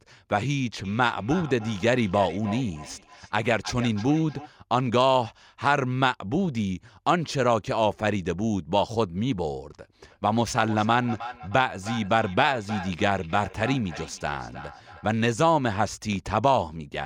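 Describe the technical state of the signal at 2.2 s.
At 2.2 s the speech carries feedback echo between two devices, running from 0.84 to 4.52 s. Each word returns about every third of a second, peaking about 14 dB below the speech. A nearby device replays this microphone's audio, and no echo canceller removes it.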